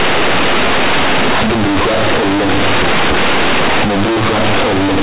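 From start to finish the speech comes through as harsh, very loud, buzzy distortion, with heavy noise filling the pauses so that quiet moments are almost as loud as the speech. This is companded audio read as linear: the bytes were written as mu-law but played back as plain 8-bit samples with no expansion. Each sign change throws the output across about half its range, flattening level differences and bending the waveform out of shape, while the 8 kHz G.711 mu-law coding underneath stays intact.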